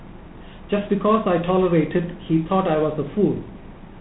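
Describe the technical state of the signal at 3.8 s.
At 3.8 s, as throughout, the speech passes through G.726 ADPCM. Its few bits per sample of prediction difference, which fits 24 kbit/s, leave a harsh rasping hiss tracking the level, with nothing above 3.9 kHz.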